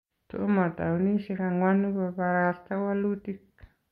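Speech recording with no technical faults to report.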